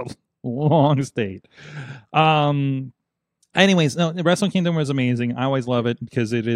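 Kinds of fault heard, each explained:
No kinds of fault are heard in this speech.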